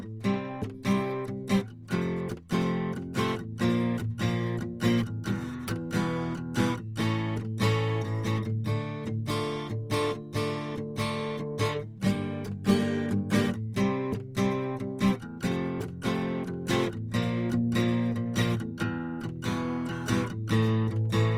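From start to finish, the music carries Opus compression damage, and it is plainly audible. Tones sound rough and grainy rather than clean. Sustained parts take on a noisy texture. This is likely the codec running short of bits. It keeps each band's energy but refills the detail with folded or noise-like content. The damage fits a low rate near 24 kbps in music mode. The top end still reaches about 20.3 kHz.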